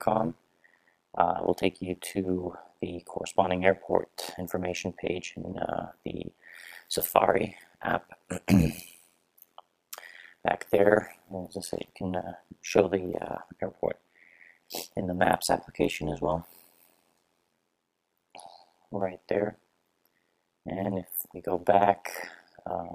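A fast, rough flutter runs through the audio from start to finish, chopping it into a buzzy, robotic tremolo that pulses around a hundred times a second, with the level dipping by about 60 dB on each cycle. This is overlap-add ripple: the audio was split into windowed frames and rebuilt with an overlap whose windows do not add up to a steady gain, so the loudness swells and collapses once per frame.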